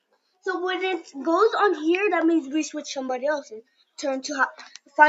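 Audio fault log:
throughout: noise suppressor applied to music or sounds. A speech-tuned suppressor treats held tones, ambience and tails as noise, so the level keeps dipping and recovering by around 5 dB as the sound steadies or fades. Unlike a compressor, this follows how steady the sound is, not how loud it is.
0.01–0.46 s, 3.62–3.98 s, 4.69–4.98 s: sound cut by the noise suppressor. Here the suppressor bears down hardest, with drops of about 21 dB, about 20 dB and about 11 dB, covering roughly a third, a third and a fifth of a second. The sound sinks and thins rather than vanishing like a dropout, and onsets still get through. The top end stopping near 8 kHz comes from the call codec's bandwidth, not the suppressor.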